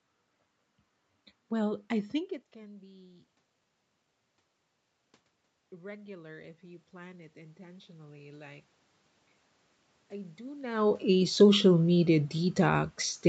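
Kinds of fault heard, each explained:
Automatic gain rising: the gain control slowly lifts a quiet input, by about 7 dB from 5.7 to 8.7 s after a drop of about 19 dB, and by about 4 dB from 10.09 to 11.7 s. Room noise swells with the speech, unlike a talker moving closer.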